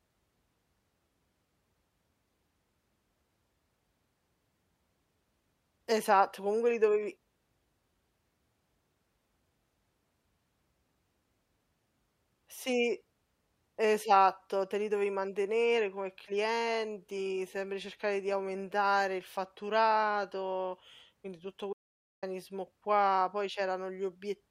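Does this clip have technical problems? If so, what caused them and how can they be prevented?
Yes. There is an audio dropout to silence from 21.73 to 22.23 s. The input feed was most likely interrupted, through a loose connection, a failing link or a momentary mute, while the recorder kept writing silence. The result is that the speech cuts off abruptly and resumes after about half a second of total silence, with no room tone in the gap, and whatever was said in that span is lost. Securing cables and connections, monitoring input levels live and disabling stray mute controls would prevent this.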